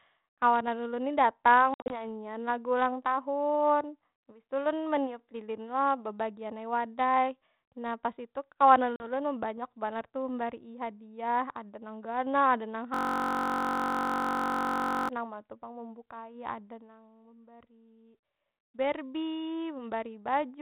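From 1.74 to 1.94 s the speech breaks into hard-edged silent gaps totalling 120 ms, the longest 60 ms, and after each gap it resumes slightly distorted before settling. This is packet loss on an ADPCM call: several packets went missing, and the decoder's predictor and step size drifted from the sender's. A shorter dropout of about 40 ms at 8.96 s does the same, with a couple of packets gone.

From 12.94 to 15.09 s a steady buzz at 46.9 Hz replaces the speech. This is a system hang loop: a 21.33 ms fragment repeats about a hundred times while the hardware cycles its ring buffer, which fits a 1024-sample buffer. Underneath everything the G.726 ADPCM link at 32 kbit/s keeps the band below 4 kHz, with light coding noise.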